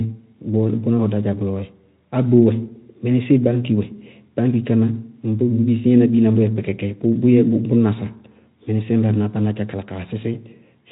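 Listening to this speech clip, nothing stood out as a technical problem.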